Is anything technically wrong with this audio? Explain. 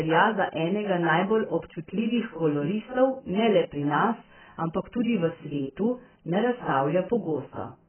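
Yes. AAC compression at a very low bitrate is audible for the whole clip. Nothing reaches above about 3.1 kHz, so the speech sounds muffled and dull, and heavy smearing gives it a watery, warbling texture with fizzy sibilants. The likely cause is an AAC-LC encoder starved of data, which fits a rate of around 9 kbps. It lowered its cut-off and coarsely quantised the remaining bands, leaving gaps in the spectrum.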